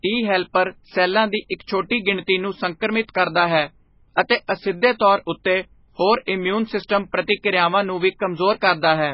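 MP3 compression runs from start to finish. Heavy damage leaves nothing above 5.5 kHz, so the speech sounds dull and watery, with swirling, metallic s sounds and smeared consonant attacks. This is likely a starved encoder, consistent with roughly 16 kbps, zeroing weak frequency lines.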